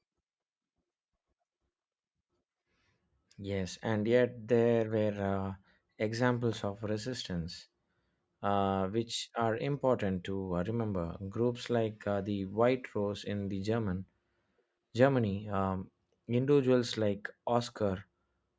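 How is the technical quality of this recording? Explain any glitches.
No technical faults are audible.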